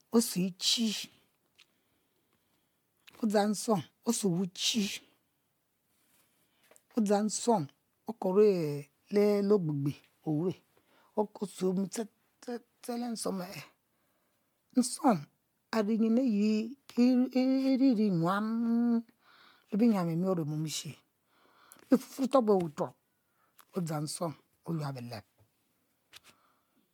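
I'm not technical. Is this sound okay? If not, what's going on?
No. The recording has likely been through MP3 compression again and again, roughly seven times over, with each save squeezing the audio afresh and on a slightly shifted timing grid. This is called generation loss. Throughout the speech, the small damage from each pass piles up, so it sounds swirly, smeared and hollow, as if heard through a tube, and the starts of sharp sounds like consonants come out blurred rather than crisp.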